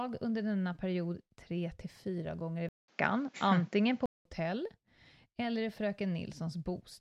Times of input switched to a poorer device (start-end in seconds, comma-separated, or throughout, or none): 2.69-4.25